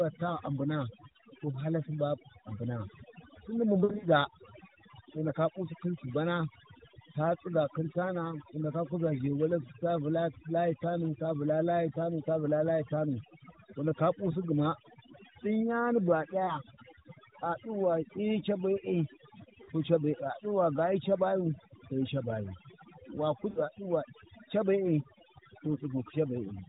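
Overdone noise removal runs through the whole speech clip: the suppressor clamps bands near its noise estimate, so the background sits near-silent with twinkly specks. On top of that narrowband mobile sound, lost AMR speech frames hit from 3.84 to 4.09 s, where about 120 ms of gaps are scattered over 200 ms with the longest run 60 ms. They hit again at 16.44 s right after "bu a", at 19.64 s, and at 23.50 s. Each time the decoder stretches the last good frame with fading gain, so you hear a brief warble or dip before the voice comes back rough.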